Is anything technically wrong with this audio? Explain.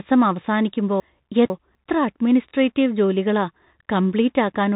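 Yes, two faults are audible in this speech. Throughout, the Bluetooth CVSD headset codec limits the audio: the codec sends one bit per sample, up or down, with a step size that keeps adapting, and the sound points to the usual 64 kbps Bluetooth headset link. Nothing above 3.8 kHz survives, so the speech is narrow and boxy. The damage is plainly audible: s sounds turn scratchy, loud bright moments distort where the signal outruns the step, and a granular hiss sits underneath.

Between 1.0 and 1.75 s, chunks out of order jumble the speech. A 250 ms piece of audio landed two chunks late and plays after the two pieces that should have followed it. Nothing is missing, but the sequence is scrambled, so that stretch sounds garbled and out of sense. There are three hard joins between the misplaced chunks.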